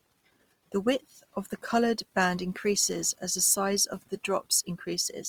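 Opus compression runs throughout the speech, likely from its music (CELT) mode at a low rate near 24 kbps. Bands starved of bits are filled with folded or noise content, so the voice sounds plainly grainy and rough rather than swirly, with nothing above 20.4 kHz.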